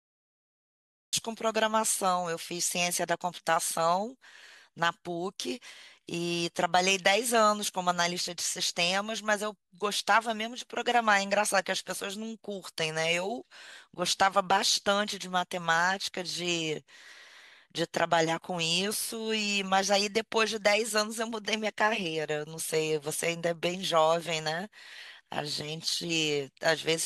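Cut-off start at 1.13 s: the first 1.13 s of the speech clip are digital silence, and the audio then begins abruptly in the middle of a sound rather than at its onset. Capture or streaming began late, so whatever was being said before that point was lost, and the first audible syllable enters at full level with no natural attack or fade-in, sounding clipped off at its front edge.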